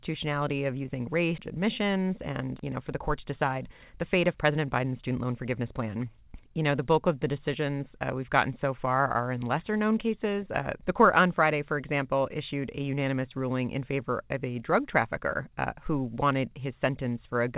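Right after "of using", at 1.38 to 1.40 s, a skip ahead drops about a second of speech and joins both sides directly, with no silent gap as in a dropout. From 1.58 to 5.89 s, a jitter buffer speed-up trims short pitch-period pieces, removing about half a second. The speech runs at 113% speed, but unlike a resampling error, its pitch stays the same.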